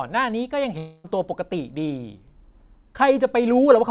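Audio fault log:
0.78–1.06 s, long network dropout: for about 0.26 s the sound turns into a fading buzz or hiss as the receiver stretches the last audio to cover the gap, likely because packets stopped arriving. Speech then resumes with that stretch missing, within narrowband audio capped at 4 kHz.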